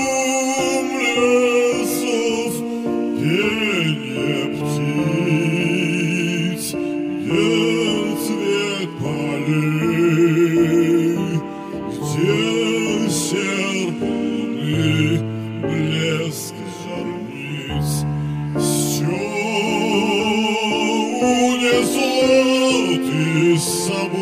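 No technical faults can be heard anywhere in the audio, so there are none to describe.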